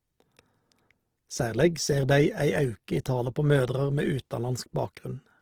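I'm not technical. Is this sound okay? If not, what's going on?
No. Opus compression is heard from start to finish, likely from heavy file squeezing: missing detail gets patched with noise, so the speech sounds grainy and rough.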